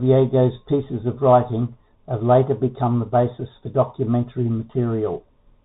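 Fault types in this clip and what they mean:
Bluetooth CVSD headset codec: Throughout the speech, the sound is encoded one bit at a time, each bit only nudging the level up or down by a step that keeps resizing itself, which fits a 64 kbps stream. Nothing above 4 kHz survives, s sounds come out scratchy, loud bright moments overrun the step and crackle, and a grainy hiss sits underneath. A plain telephone-band filter would dull the top end but leave no granular hiss or slope-overload crackle.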